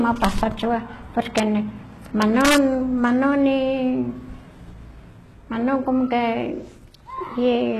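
Throughout the clip, heavy codec damage and an empty band above 12.3 kHz point to HE-AAC compression, likely at a low bitrate near 16 kbps; the rebuilt treble makes the speech's s sounds gritty and metallic.

Integer overflow cracks sharply at 0.25 s and 1.38 s, then repeatedly from 2.22 to 2.57 s. Peaks exceeding the integer limit by about 1 dB, then about 2 dB, wrap to the opposite sign instead of being limited.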